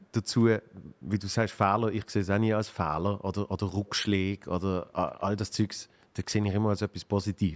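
From 3.86 to 4.03 s, a faint copy of the speech returns 445 ms late, roughly 30 dB down. That is echo leak, likely a loudspeaker's sound that the far-end echo canceller missed. Unlike room reverberation, it is a distinct delayed repeat rather than a smooth decaying tail.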